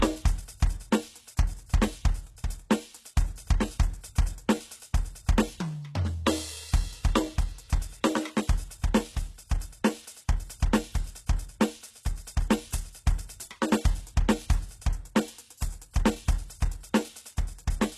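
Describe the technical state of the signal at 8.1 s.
At 8.1 s the music is still under the HE-AAC compression present across the whole clip, likely at a very low bitrate near 16 kbps: the treble is rebuilt from copied lower bands rather than coded, so it sounds gritty and metallic, with nothing above 12.3 kHz.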